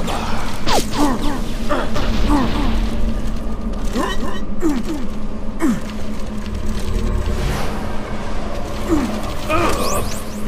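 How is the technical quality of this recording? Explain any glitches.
There's one real glitch here. From the very start until 5.4 s there's a doubled audio track: a second, full-band copy trails about 300 ms behind, roughly 5 dB quieter. It's likely a slower capture path feeding the same audio twice, so you hear a dry, slapback-style echo that cuts off abruptly.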